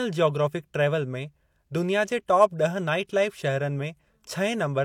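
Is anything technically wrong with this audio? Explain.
Yes. Throughout, the speech shows low-bitrate audio saved at a high bitrate, likely a heavily compressed encode re-saved at a generous rate. The re-save cannot restore what was lost, so the earlier artefacts remain and there is nothing above 18.5 kHz.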